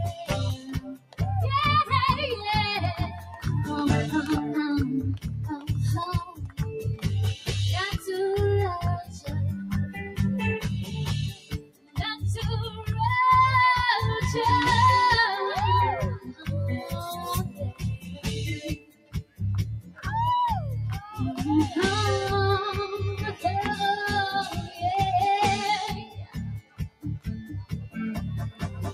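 A noise suppressor designed for speech was left running on this audio, and throughout it treats steady and sustained content as noise, so the level swings by around 10 dB as it clamps down and lets go. Onsets mostly pass while held sounds and tails sink, which gives a pumping, thinning quality across the whole clip.

The suppressor cuts the sound harder in seven places, where sustained or decaying material is pulled well below the surrounding level and tails are chopped short. It does this from 0.2 to 1.21 s (down about 18 dB), from 3.09 to 3.46 s (about 10 dB), from 5.17 to 8.07 s (about 18 dB), from 9.04 to 12.23 s (about 18 dB), from 16.19 to 20.06 s (about 18 dB), from 24.57 to 24.82 s (about 7 dB), and from 25.97 to 28.79 s (about 18 dB). The longer stretches hollow out repeatedly for a second or two in total.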